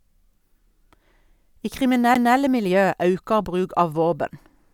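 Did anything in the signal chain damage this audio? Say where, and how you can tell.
Yes. A CD skip at 2.14 s, at the playback stage in the disc transport. There is a brief mute of about 10 ms, and the speech resumes from a different point rather than continuing where it left off. That discontinuity shows the laser lost its track, through a knock or a disc flaw, and relocked on another turn of the spiral. The player silenced its output while it recovered the read position.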